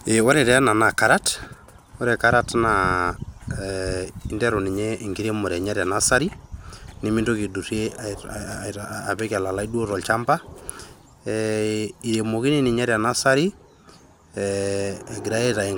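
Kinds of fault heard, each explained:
No technical faults can be heard anywhere in the speech.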